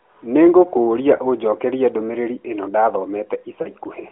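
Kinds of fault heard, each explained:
Lost AMR speech frames: radio errors corrupted speech frames so they failed their check, and the decoder filled the gap by reusing the last good pitch and vocal tract settings at reduced gain. At 1.16 to 1.20 s this leaves a brief dip and warble, which fits a single lost 20 ms frame. At 3.62 to 3.68 s the sound smears and fades slightly longer, pointing to two frames, about 40 ms, before speech returns through the narrowband AMR path.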